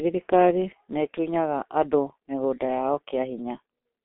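G.723.1 codec damage runs throughout the speech, from start to finish. The codec models the voice in coarse 30 ms frames and refreshes that model slowly, so consonants smear together and vowels take on a hoarse roughness. The damage is heavy, which fits a bitrate near 6 kbit/s. The band is telephone-narrow, roughly 250 Hz to 3.4 kHz, and nothing at all comes through above 3.8 kHz, leaving the speech muffled and thin.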